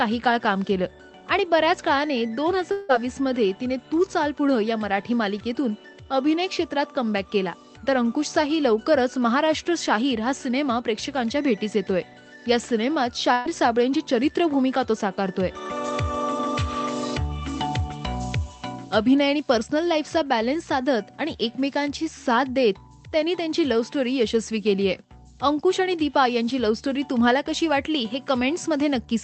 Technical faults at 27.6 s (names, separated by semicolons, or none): none